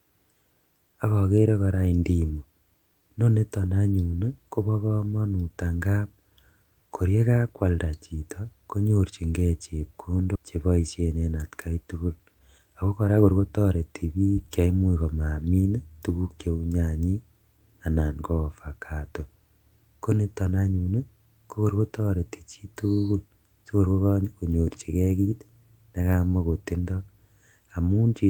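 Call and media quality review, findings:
Skip ahead at 10.35 s: speech jumps forward with no fill, about 0.7 s gone. Queued audio dropped in transit or by the jitter buffer on overflow, splicing both sides nearly directly.

Jitter buffer speed-up right after "akta tugul", 12.19–13.72 s: speech runs about 115% fast, same pitch, sounds rushed. Buffer trimming pitch-period chunks, roughly 0.2 s total, to shed excess delay.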